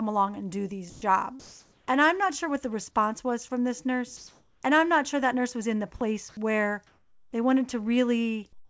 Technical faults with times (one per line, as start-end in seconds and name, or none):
0.90-1.02 sound dropped by the voice detector
1.40-1.88 comfort noise in place of the background
4.17-4.63 comfort noise in place of the background
5.97-6.01 sound dropped by the voice detector
6.29-6.37 sound dropped by the voice detector
6.87-7.33 comfort noise in place of the background
8.53-8.68 comfort noise in place of the background